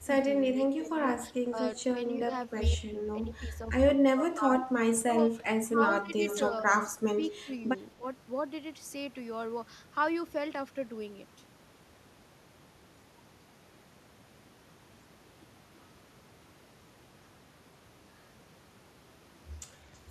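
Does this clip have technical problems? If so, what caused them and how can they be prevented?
Yes. Speech suppressed in double talk appears from 0 to 1.57 s and again from 2.28 to 8.03 s, likely because an echo canceller could not tell the near talker apart from loudspeaker echo while both sides spoke, so it turned everything down. The voice dips in patches, by about 10 dB in the first stretch (roughly half a second in total) and by around 25 dB in the second (about two seconds in total), at times close to cutting out. Preventing it calls for a canceller with better double-talk detection, or a headset so the far side's audio never reaches the microphone.

Echo leak runs from 5.97 to 7.81 s, likely because a loudspeaker-using participant's echo canceller let part of its microphone pickup pass back into the call. A faint copy of the voice trails the original by 0.32 s, sitting about 20 dB below it, so it sounds like a delayed ghost overlapping the speech. 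Headphones on the loudspeaker side, or a properly tuned echo canceller there, would stop the returned copy.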